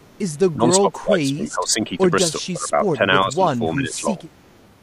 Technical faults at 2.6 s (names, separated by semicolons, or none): speech suppressed in double talk